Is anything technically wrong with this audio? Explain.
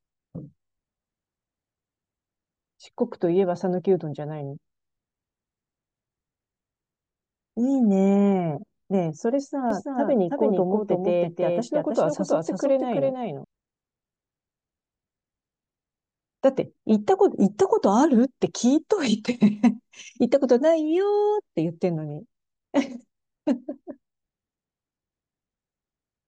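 Yes. From 9.70 to 13.44 s there is a doubled audio track: a dry second copy trails by roughly 300 ms at about 5 dB lower, likely from a slower capture path. It sounds like an abrupt slapback echo, and the spectrogram shows each full-band pattern repeated just to the right.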